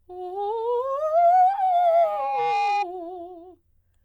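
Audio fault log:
1.55–2.87 s, loudspeaker feedback squeal: a single 814 Hz tone swells over about a second until it sits at roughly the level of the music, because the microphone is re-hearing its own loudspeaker and, at that frequency, the loop keeps amplifying itself.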